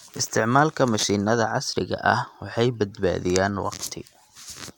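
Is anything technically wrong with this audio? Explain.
No, nothing technically wrong can be heard in this speech recording. There is no fault to point to at any moment in it.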